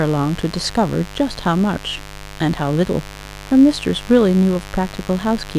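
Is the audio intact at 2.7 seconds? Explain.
No. Across the whole clip, including 2.7 seconds, sharp switching spikes from the 50 Hz mains supply leak into the signal path twice per cycle, spraying harmonics up into the kilohertz range. The result is mains buzz, a steady, raspy drone sitting roughly 20 dB under the speech.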